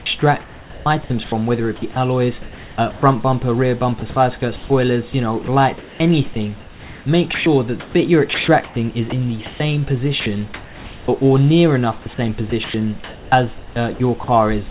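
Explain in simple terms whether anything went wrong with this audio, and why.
The sound keeps dropping out into a soft synthetic hiss at 0.0–3.0, 4.0–9.6, 10.2–11.1 and 12.0–14.7 s. That's sound chopped by the voice detector, likely switching quiet bits off and filling in comfort noise.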